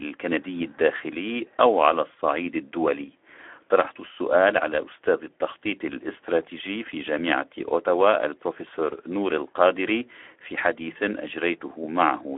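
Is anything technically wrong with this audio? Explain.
Yes. Speex codec damage runs through the whole clip. Speex is a CELP coder that models the vocal tract and spends its limited bits on the excitation signal. Here the excitation is too coarse, with damage that fits a low setting of around 11 kbps, so the speech sounds plainly noisy and hoarse. The audio is also confined to a telephone-like band of about 300 Hz to 3.5 kHz, which makes it thin and muffled.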